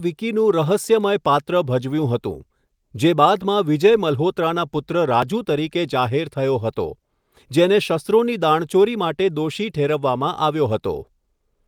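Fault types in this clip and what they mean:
No faults are audible anywhere in this speech recording.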